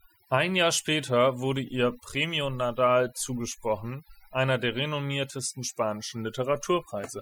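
From start to finish the gaps between phrases drop to near silence flecked with twinkling specks. This is overdone noise removal. A noise reduction stage was pushed too hard, so every frequency band that fell close to its noise estimate was pulled far down or switched off entirely. The quieter components of the voice were caught in that cut alongside the noise.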